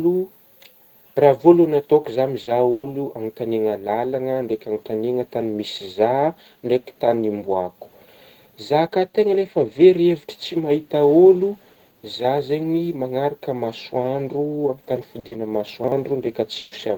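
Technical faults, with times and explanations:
2.43 to 2.50 s, short concealed packet loss: about 40 ms never reached the decoder, so the receiver extended the last sound, leaving a brief smear or wobble.
2.71 to 2.86 s, burst of packet loss: 120 ms of consecutive audio was lost, and the receiver stretched the last sound while fading it, giving a held buzz or hiss before speech resumes further on.
15.19 to 15.26 s and 15.27 to 15.34 s, short concealed packet loss: two 40 ms gaps in close succession were filled from the preceding sound, producing a double wobble.
15.84 to 15.92 s, chunks out of order: a 40 ms chunk arrived one chunk late and played after its successor, so the order jumbles briefly at the hard joins.
16.59 to 16.74 s, burst of packet loss: another 120 ms run went missing, concealed by a fading continuation of the last sound, so that stretch is lost.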